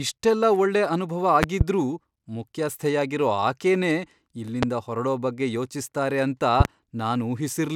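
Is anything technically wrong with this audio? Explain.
Yes. There are loud pops: a double pop at 1.43–1.63 s after "ಇಷ್ಟೆಲ್ಲ ಒಳ್ಳೆ ಅನುಭವ", a single one at 4.63–4.65 s before "ಹೊರಡೋ ಬಗ್ಗೆ ಯೋಚಿಸ್ತಾರೆ ಅಂತ", and another double at 6.60–6.68 s after that phrase. Each is about 20 dB above the speech and is likely a voltage spike from a plug, switch or static. Unlike a dropout, the speech carries on beneath each thump.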